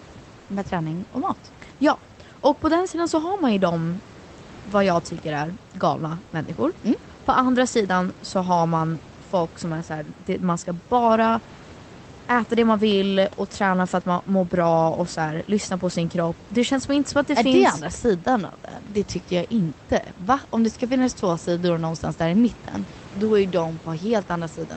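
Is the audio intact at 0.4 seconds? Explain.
No. From 0.39 to 0.47 s, just before "med träning och mat", about 80 ms of the room background gives way to smooth, featureless hiss at the same level. That's comfort noise in place of the background, likely from discontinuous transmission filling the gap with synthetic noise.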